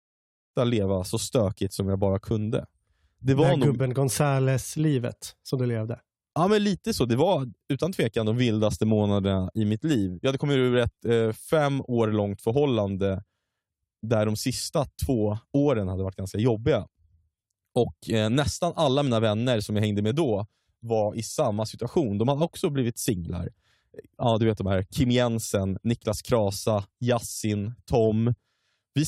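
No technical faults can be heard in this recording.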